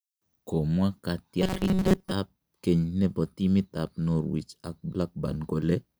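Robotic sound from repeated short buffers runs from 1.42 to 2.13 s in this speech clip: the voice becomes a rigid metallic buzz near 188 Hz, likely because audio arrived too late and a roughly 5 ms slice was looped over most of that stretch.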